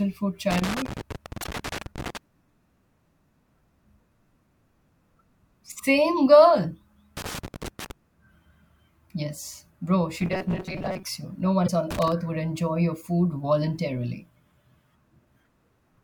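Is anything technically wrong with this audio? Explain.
Yes, the speech has three kinds of fault. Loose connector crackle appears at 0.51–2.17 s, 7.17–7.91 s and 11.91–12.12 s (just before "would enjoy your food"). A worn contact chops the signal, making irregular scratchy bursts that show as ragged vertical spikes on the waveform.

Damaged data in a compressed stream occurs at 1.40–1.45 s and 11.64–11.70 s. Corrupt frames throw the decoder out of sync, giving a brief chirp or blip that shows as a short, smeared broadband patch.

From 10.21 to 11.03 s, after "bro she", the speech turns into a rigid metallic buzz at 188 Hz. This is robotic sound from repeated short buffers, likely from chunks of about 5.3 ms being looped while roughly half the audio is lost. A spectrogram would show evenly spaced horizontal harmonic lines.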